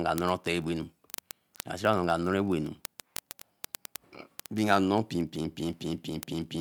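Speech with a fast, steady rattle of word clock ticks running from 0.12 s right to the end, roughly one every 20 ms. The receiving device isn't locked to the sender's clock, with the two about a thousand parts per million apart, so a single sample gets dropped or doubled at each slip, and you hear a few hundred sharp, uneven clicks.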